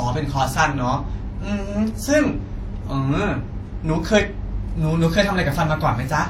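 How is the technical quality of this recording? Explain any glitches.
The recording is compromised by compression damage that runs through the whole speech clip. From start to finish the audio has two distinct kinds of codec artefact audible at once and nothing above 16.2 kHz. The likely cause is transcoding between lossy codecs: an earlier WMA-style encode re-encoded as low-bitrate HE-AAC. The second codec wasted bits reproducing the first one's flaws, added its own, and kept the band-limit.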